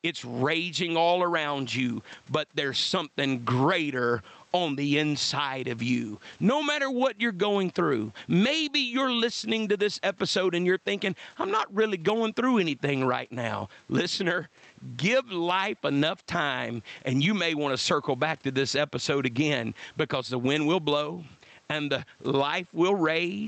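Gain pumping runs through the whole recording. The room background, about 42 dB below the speech, rides a gain swing of around 15 dB. The likely cause is input gain set far too high, with a fast limiter clamping every peak, which squashes the speech.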